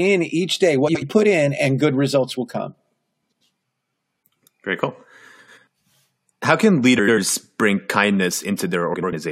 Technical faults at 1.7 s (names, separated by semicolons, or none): none